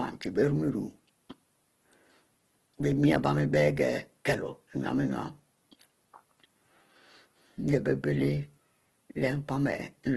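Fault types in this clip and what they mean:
Opus compression: throughout, the speech sounds grainy and rough with nothing above 12.1 kHz, likely from Opus music-mode coding at a bitrate near 12 kbps.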